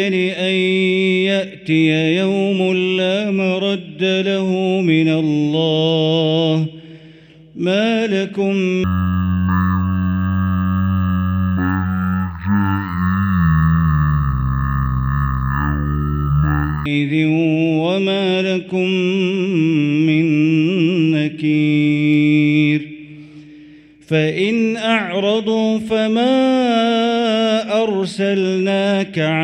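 From 8.84 to 16.86 s, the audio falls into a stereo read as mono fault. Left and right samples are taken in turn as one channel. The sound slows to half speed and drops a full octave. It resumes normal playback after 16.86 s.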